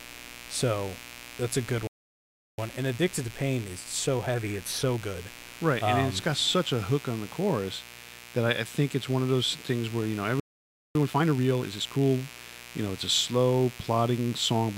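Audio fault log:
throughout: mains buzz. A steady, raspy buzz sits under the speech at about 20 dB below it, built on 60 Hz and its harmonics reaching well up into the kilohertz range. Sharp switching spikes leaking in twice per mains cycle give it that edge. A clean 60 Hz hum would sound like a soft low tone, but this one has a rough, buzzy edge that stays the same whether or not anyone is talking.
1.87–2.58 s: playback stall. Right after "that's a good" the speech drops to silence for about 0.71 s and then carries on. The player likely ran out of data or had its thread blocked.
10.40–10.95 s: playback stall. After "things where you know" the audio goes silent again for about 0.55 s and then resumes.
2.58–5.58 s: time-compressed catch-up. Just after the first stall, the speech runs about 1.1 times fast for 3 s while the player trims its backlog by cutting and cross-fading small pieces. 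The pitch stays normal, unlike a simple speed-up that would raise it.
10.95–12.05 s: time-compressed catch-up. After the second stall the hurrying is stronger, at 1.5 times speed for 1.1 s. The speech is clearly rushed but still at its normal pitch.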